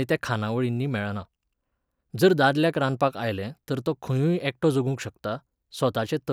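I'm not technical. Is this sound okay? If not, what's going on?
Yes, the sound is okay.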